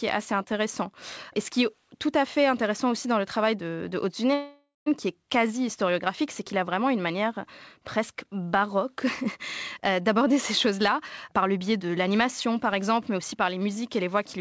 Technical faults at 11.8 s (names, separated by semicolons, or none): jitter buffer speed-up